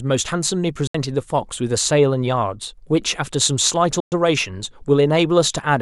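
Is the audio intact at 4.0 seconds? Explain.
No, the speech drops to silence from 4.00 to 4.12 s, then resumes further along. That's likely a Bluetooth dropout, with late packets discarded.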